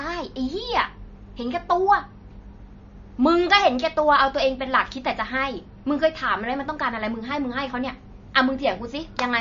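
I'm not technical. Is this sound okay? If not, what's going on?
No, not quite. All the way through, the speech sounds dull and watery, with a clearly audible swirly, metallic edge on s sounds. Nothing comes through above about 7.2 kHz, so the crisp top end of the voice is simply gone. That's likely MP3 compression squeezed too hard: the encoder ran short of space, chopped off the treble, and let the quieter detail flicker in and out, which causes that warbly quality.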